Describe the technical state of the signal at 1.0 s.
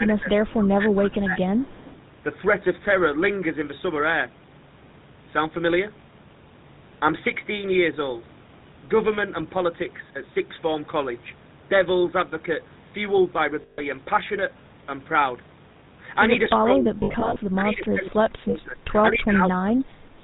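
At 1.0 s the speech sits inside a stretch of speech suppressed in double talk, running from 0.0 to 1.37 s. The level dips by up to about 15 dB and parts drop away for about a second in total, most likely because an echo canceller ducked the talker while the far side spoke.

The whole clip, this moment included, carries the GSM full-rate codec sound, which fits a 13 kbps coder. Sparse pulse excitation driving a vocal-tract model gives the voice a buzzy, gravelly roughness, and nothing passes above 4 kHz. That grit in the excitation, not just a narrow bandwidth, sets it apart from a simple low-pass telephone band.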